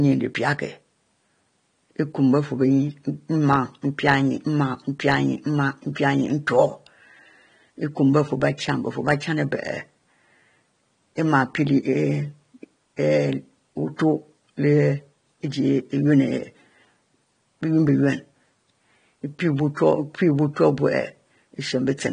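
Throughout, the speech sounds dull and smeared, with fizzy sibilants and nothing above 9.8 kHz, likely from AAC compression at a bitrate around 32 kbps.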